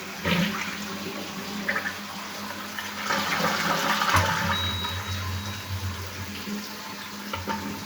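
No faults detected in this recording of sounds; nothing audible calls for attention.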